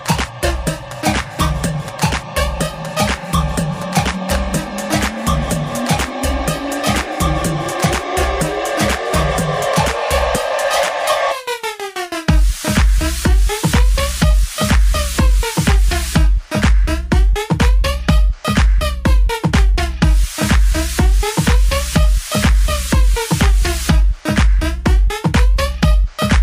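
Imaging from linear upsampling runs through the whole clip. The high end sounds consistent with a conversion from 24 kHz to 44.1 kHz in which new samples were placed on straight lines between the old ones. That crude interpolation softens the top of the original band and fails to remove mirrored copies of the spectrum, which sit between 12 and 24 kHz, roughly 30 dB below the signal. They add a faint metallic shimmer to bright, sibilant and high-pitched material.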